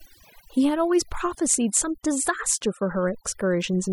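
Overdone noise removal runs the whole way through: the denoiser clamps bands near its noise estimate, so the background drops and breaks up into twinkly specks and quiet parts of the speech go with it.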